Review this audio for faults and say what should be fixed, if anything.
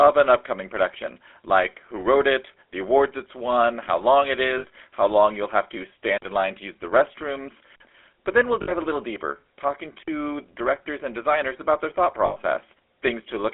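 GSM full-rate codec, throughout the 14-second speech clip: the voice has a buzzy, gravelly roughness and a narrow telephone band of roughly 300 Hz to 3.5 kHz, with nothing above. The codec models the vocal tract and excites it with a sparse, evenly spaced pulse train, so fine detail in the voice is lost. The damage is plainly audible and consistent with the 13 kbps full-rate mode. To prevent it, route the call through a wideband or more modern codec such as AMR-WB where both ends support it.

Lost GSM frames at 4.58 s (60 ms), 8.62 s (about 60 ms) and 12.26 s (about 100 ms): at each point the voice freezes into a rough, metallic ring instead of moving on. The decoder is covering missing frames by repeating the last good frame's parameters. The 60 ms events fit three 20 ms frames, and the 100 ms one fits five. To prevent it, improve the radio or transport link, for example with better coverage or more error protection, so fewer frames arrive corrupted.

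Block of digital silence at 6.18 s, 7.76 s and 10.03 s, each about 46 ms: the sound drops to silence and returns with no fade, leaving a short hole in the speech. The identical lengths fit a 2048-sample buffer that the playback or processing program failed to fill in time. To prevent it, give the audio thread higher priority or a larger buffer margin so every output block is written before it is needed.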